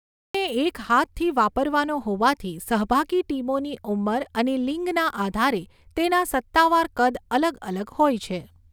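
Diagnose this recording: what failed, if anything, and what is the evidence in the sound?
A cut-off start occurred at the recording or capture stage. From 0.0 s to 0.35 s there is pure digital silence, then speech begins abruptly in the middle of a sound with no natural onset. Capture started after the talker had already begun.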